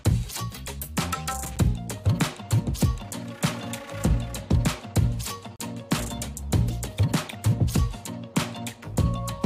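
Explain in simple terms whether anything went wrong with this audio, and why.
A gap between stream segments: the audio arrives in chunks about 4 seconds apart whose timings don't quite meet, so the player inserts silence. You hear brief hard-edged dropouts at 1.56 s and from 5.56 to 5.60 s, but nothing is lost.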